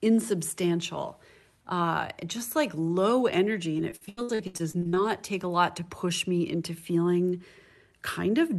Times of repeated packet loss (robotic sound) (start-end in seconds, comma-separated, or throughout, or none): 3.77-4.98